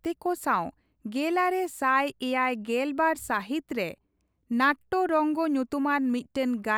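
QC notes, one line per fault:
No faults heard in this speech recording.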